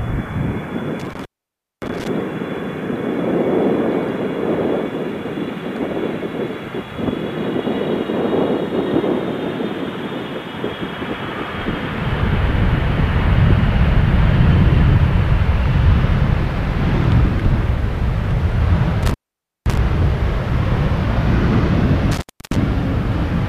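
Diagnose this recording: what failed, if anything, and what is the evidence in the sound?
Intermittent contact in the analogue wiring: dropouts at 1.0–2.08 s, 19.03–19.77 s and 22.11–22.56 s, the line open for about 570, 520 and 300 ms. A loose connection breaks the signal, so the waveform collapses to near-flat with crackle spikes at each edge.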